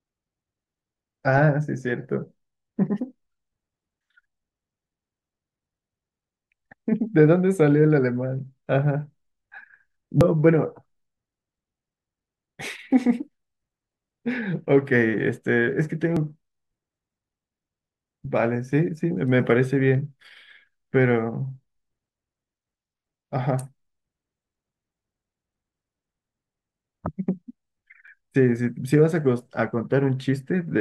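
The speech skips four times, at 4.25, 10.21, 16.17 and 28.08 seconds. Each skip removes a sliver of sound, around 40 ms, and the two sides butt together with no gap of silence. The first three skips fall about 6 seconds apart, and the last comes about 12 seconds after the third. That spacing is the signature of audio missing between chunks. The likely cause is a recorder working in 6-second blocks that drops a short piece each time it hands over to the next block.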